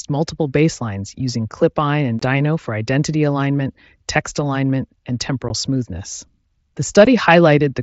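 Unconcealed Bluetooth headset packet loss cuts three holes. A 22.5 ms gap falls at 2.19–2.22 s, before "for identity alignment text". 15 ms gaps follow at 5.49 s, after "alignment text alignment and", and at 7.05 s. Lost packets became silence or an idle pattern. The holes have abrupt edges.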